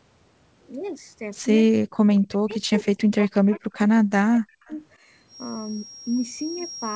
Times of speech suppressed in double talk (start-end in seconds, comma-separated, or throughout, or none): 1.71-4.70